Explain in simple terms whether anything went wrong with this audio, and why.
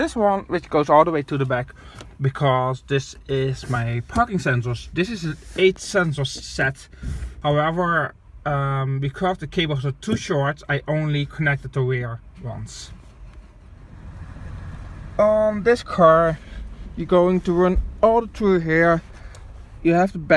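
Nothing stood out as having gone wrong when listening to this audio.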